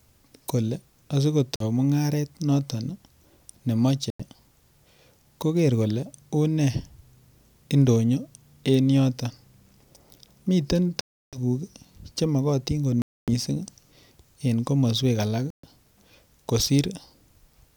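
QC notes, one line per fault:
1.56–1.63 s, 4.10–4.22 s, 11.01–11.38 s, 13.02–13.30 s and 15.50–15.67 s: Bluetooth stall. The speech drops out cleanly to silence, from a short blip of about 46 ms up to longer gaps of 321 ms and 259 ms near 11 and 13 s, then resumes where it left off. That pattern likely comes from interference holding up packets, so the headphones' buffer runs dry and playback pauses until the resent audio arrives.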